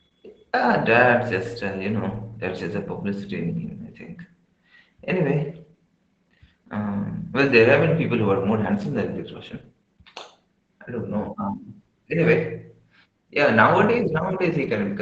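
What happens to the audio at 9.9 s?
At 9.9 s you're hearing the Opus voice compression that runs the whole clip: SILK's coarse excitation leaves speech hoarse and slightly robotic, with nothing above 8.6 kHz, about what you'd expect near 12 kbps.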